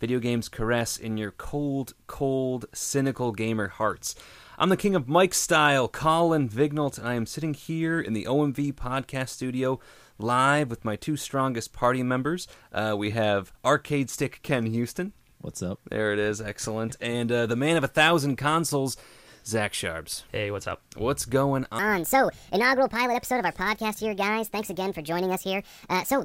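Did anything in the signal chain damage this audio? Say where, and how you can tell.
Yes: a wrong sample rate at playback. From 21.79 s to the end, everything runs 1.5 times fast and about 7 semitones sharp, which fits 32 kHz material clocked out at 48 kHz.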